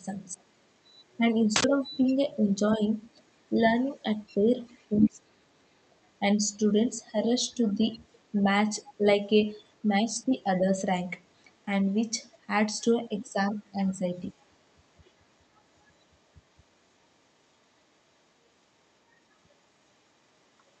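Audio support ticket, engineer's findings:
Other side's voice leaking through: echo canceller likely left residual loudspeaker echo in the mic feed. Far-end voice audible under the talker at 0.87–1.17 s, faint; at 4.67–5.10 s, much stronger, close behind the talker's level. Brief, very faint scraps at 8.12–8.19 s, 13.26–13.30 s, 15.56–15.61 s and 15.81–16.04 s. Leaked voice sits well below the near-end speech except in the 4.67 s burst.

Speech suppressed in double talk: canceller likely misread simultaneous talk as echo and attenuated the near-end signal along with it. At 4.89–5.53 s, overlapping the strong leak, the talker drops sharply, a deep cut lasting about half a second that leaves the voice nearly gone. At 13.26–13.35 s, only a slight, momentary level dip coinciding with a faint leak.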